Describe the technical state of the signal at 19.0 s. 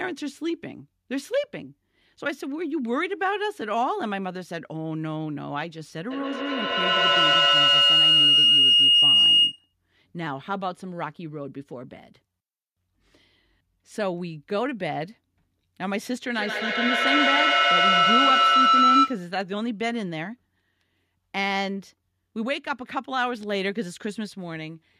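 A microphone-to-loudspeaker loop gaining level on each pass produces feedback howl from 16.35 to 19.33 s. It is a tone near 1.5 kHz, about 8 dB above the speech, with the loop repeating roughly every 150 ms.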